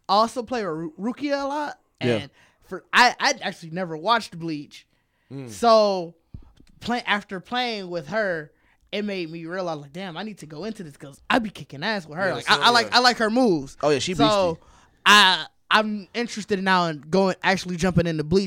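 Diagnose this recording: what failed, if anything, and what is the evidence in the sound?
No fault heard in this recording.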